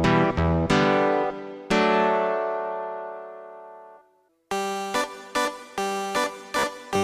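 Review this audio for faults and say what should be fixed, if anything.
A Bluetooth stutter occurs from 6.59 to 6.64 s, near the end of the clip. Packets on the wireless link arrived late or not at all. The receiver filled the gap by replaying its last short buffer, which gives a brief buzzing repeat. About 44 ms of audio is lost, which points to roughly three dropped packets. When data returns, the sound jumps ahead as if it had kept playing. Keeping the devices close and clear of 2.4 GHz interference would prevent this.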